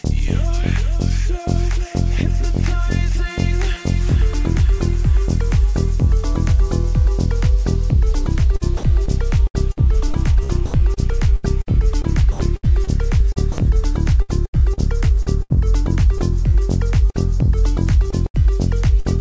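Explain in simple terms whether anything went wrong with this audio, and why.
From 8.56 s to the end at 19.20 s the sound suffers repeated packet loss (robotic sound): dozens of tiny gaps, none longer than 78 ms, are patched by stretching the previous sound, giving a choppy quality with pieces missing rather than clean silences.

Four brief dropouts at 8.77, 10.66, 12.32 and 13.52 s, each 60 to 80 ms, sound like the audio briefly giving way to steady noise or near silence. That points to sound dropped by the voice detector, likely because it mistook the sound for background and stopped sending, so the receiver played comfort noise in its place.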